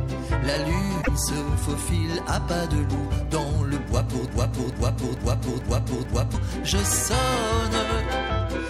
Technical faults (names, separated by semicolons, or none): damaged data in a compressed stream; broken-record loop